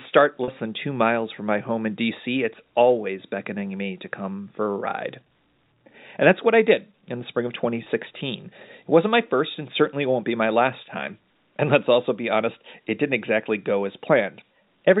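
Packet loss with pitch repetition occurs at 0.44 to 0.48 s, just before "than two miles from", and again at 7.84 to 7.86 s, right after "in the spring of". About 40 ms is missing the first time, which fits two lost packets, and 20 ms the second. The receiver fills each gap by repeating the last pitch period, so instead of a silent dropout or click there is a brief held, buzzy tone over the narrowband G.711 telephone sound.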